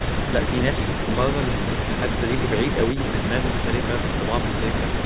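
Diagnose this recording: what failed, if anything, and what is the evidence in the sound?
Nothing failed; the speech comes through intact throughout.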